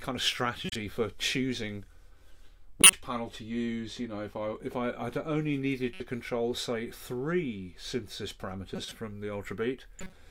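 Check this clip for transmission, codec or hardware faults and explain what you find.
There's one recurring fault: corrupt frame decoded, at 0.65–0.76, 2.81–2.96, 5.94–6.00, 8.76–8.92 and 9.99–10.13 s. Damaged compressed frames get played anyway, scattering energy to the wrong frequencies, so you hear brief chirpy noise bursts. The one near 2.8 s is loudest.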